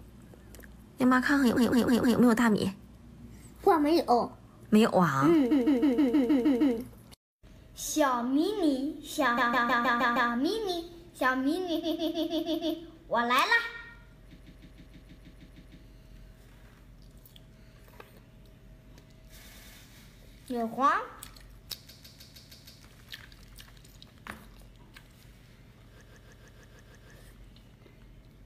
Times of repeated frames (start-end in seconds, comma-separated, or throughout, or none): 1.56-2.18, 5.50-6.76, 9.37-10.31, 11.82-12.76, 14.38-15.79, 19.45-19.76, 21.88-22.82, 26.01-27.10